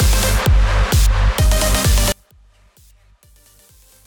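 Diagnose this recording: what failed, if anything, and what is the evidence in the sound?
One channel inverted, from 2.12 s to the end: the summed sound collapses by about 36 dB, leaving only a faint residue. The likely cause is a polarity-reversed analogue connection on one leg, so the content common to both channels cancels in mono.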